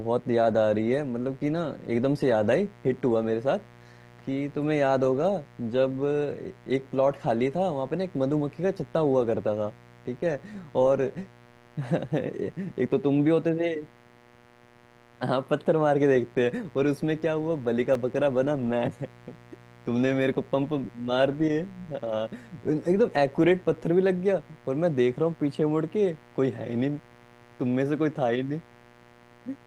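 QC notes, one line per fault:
Throughout: mains buzz. A steady, raspy buzz sits under the speech at about 25 dB below it, built from harmonics of 60 Hz reaching up into the kilohertz range. Sharp switching spikes, likely from a dimmer, rectifier or missing shield, repeat twice per mains cycle.
16.97 s and 17.95 s: block of digital silence. The signal drops to silence and returns with no fade. The first hole lasts about 4.4 ms and is heard as a tick or dip. The second, under half a millisecond, is a single tick. The abrupt edges cause the clicks.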